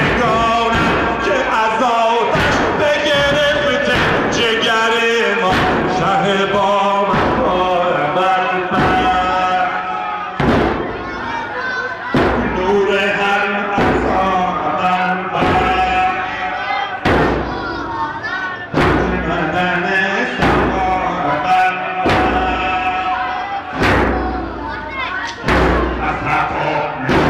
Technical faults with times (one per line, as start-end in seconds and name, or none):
none